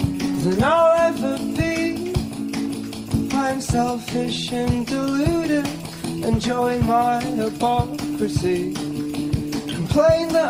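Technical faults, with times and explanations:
Nothing here stands out as a technical problem; it's all fine as far as the ear can tell.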